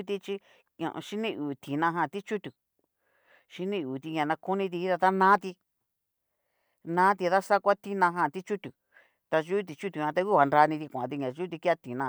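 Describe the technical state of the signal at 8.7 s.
At 8.7 s the speech signal is intact, with no audible technical fault at that moment.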